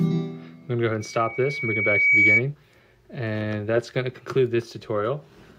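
From 1.00 s to 2.43 s a loudspeaker feedback squeal rises at 2.3 kHz, as the microphone picks up its own loudspeaker and loop gain at that pitch exceeds one. Unlike a steady interference whistle, it swells over about a second, reaching roughly 10 dB above the sound.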